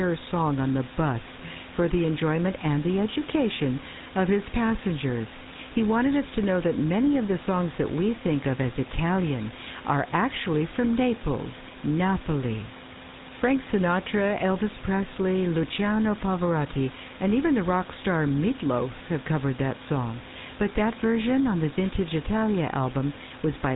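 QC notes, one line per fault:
Throughout: GSM full-rate codec. The speech has been squeezed through a vocal-tract model driven by regularly spaced pulses, keeping only every third excitation sample at about 13 kbps, giving a plainly audible buzzy, gravelly roughness. A spectrogram shows a hard ceiling at 4 kHz, with nothing above.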